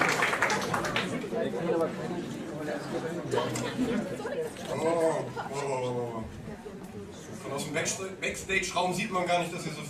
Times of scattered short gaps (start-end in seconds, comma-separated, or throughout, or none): none